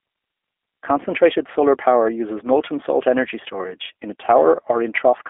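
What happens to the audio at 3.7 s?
At 3.7 s the speech carries G.729 codec damage, present throughout: it is rebuilt from a vocal tract model and sparse pulses, so it sounds rough and synthetic rather than merely band-limited. Nothing is heard above 3.7 kHz, which fits an 8 kbit/s codec.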